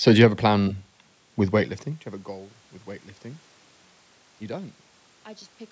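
No technical faults can be heard in this recording.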